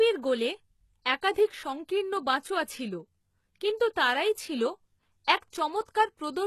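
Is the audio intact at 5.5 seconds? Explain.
No. From 5.50 to 5.53 s a short hiss creeps in about 29 ms ahead of a sharp attack, which then sounds softened and smeared. This is pre-echo: the transform codec spreads quantisation noise sized for the loud onset across its whole block, filling the quiet moment before it.

The treble here is also plainly damaged, turning gritty and metallic on s sounds, with nothing above 12.3 kHz. The likely cause is HE-AAC compression, consistent with a very low bitrate around 16 kbps: the upper band is rebuilt by copying lower bands upward, so its harmonics don't line up with the real ones.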